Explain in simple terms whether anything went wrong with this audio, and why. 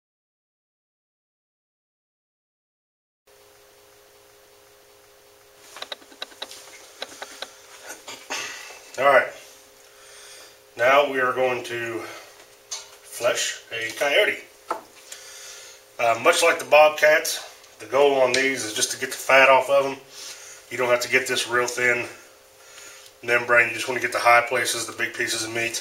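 Something did go wrong, between 3.72 and 5.57 seconds. This is a system hang loop. The computer briefly froze, but the sound hardware kept replaying the last chunk it held. That chunk lasts about 0.37 seconds. It repeats five times in a row, almost three times a second, like a machine-gun stutter. The length fits a 16384-sample buffer. About two seconds of the real audio never got played.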